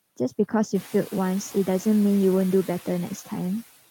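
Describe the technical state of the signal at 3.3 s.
Noise suppressor artifacts at 3.3 s, present throughout the clip: the suppressor cuts bands it takes for steady noise by about 16 dB frame by frame. The room noise, which rose about 12 dB around half a second in and sits about 20 dB below the speech, therefore sinks between words and rises again beneath them.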